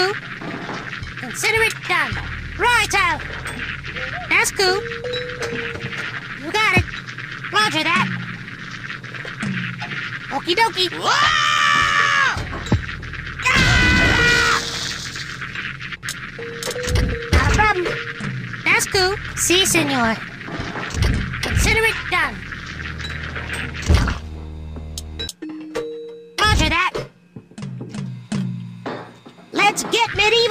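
At 11.58 s a block of digital silence lasting about 2.9 ms drops into the audio, consistent with a 128-sample output buffer left unfilled in time. It sounds like a brief tick; the waveform shows a near-flat line with abrupt edges, each drawing a thin vertical broadband stripe on a spectrogram.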